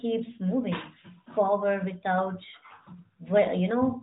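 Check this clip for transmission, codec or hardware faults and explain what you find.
One fault runs through the whole clip: AMR narrowband mobile codec damage. The speech passed through a low-rate AMR-NB coder, which rebuilds it from a coarse vocal-tract model and a few excitation pulses per subframe. Nothing survives above 3.8 kHz, and the plainly audible buzzy, synthetic edge on the speech fits a fairly high mode of about 10 kbps.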